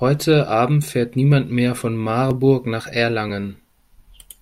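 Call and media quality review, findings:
Audio missing between chunks: brief skips in the speech at 0.33, 0.83, 1.32, 2.31, 2.80 and 3.30 s, spaced at about 0.5 s. Each loses only a few milliseconds, and the two sides are butted together with no silence. Likely cause: a capture or processing stage handling 0.5 s blocks that drops samples at each block handover. On the waveform, a sudden discontinuity at each time. On the spectrogram, a thin vertical seam at each splice point.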